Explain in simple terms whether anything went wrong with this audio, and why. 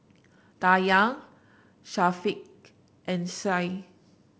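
Nothing went wrong with this speech recording. It was carried by G.722 wideband telephone coding, which keeps the speech sharp up to about 7 kHz but adds a faint hiss in the higher sounds and a slight graininess lower down.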